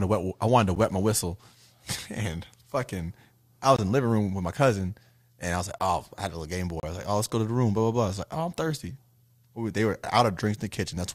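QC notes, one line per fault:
0.75 s, gap between stream segments. About 10 ms of silence breaks the speech at a segment join. The timestamps leave a hole that is filled with nothing.
3.76–3.79 s, gap between stream segments. A hard-edged dropout of about 22 ms sits at a join between one-second segments. Silence fills the mistimed boundary.
5.79 s, gap between stream segments. A brief 14 ms hole cuts the speech abruptly. The segment timestamps do not meet, so playback inserts silence.
6.80–6.83 s, gap between stream segments. The longest hole, about 31 ms, falls one second after the previous one. This is a segment boundary padded with silence, and no audio is lost.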